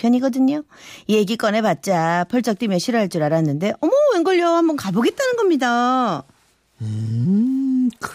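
No technical faults can be heard anywhere in the speech.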